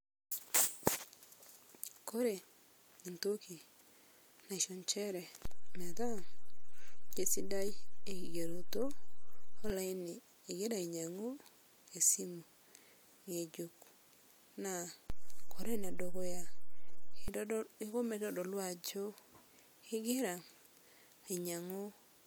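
At 5.45 s the speech's zero line jumps by about −30 dBFS in a DC step, holds until 9.70 s, then drops back; the same happens from 15.10 s to 17.28 s. Each jump and return gives a single low thump while the speech carries on intact. Unlike a dropout or a codec glitch, nothing is lost or smeared, and the step is a lasting offset, not a brief pop, so there are two thumps per event.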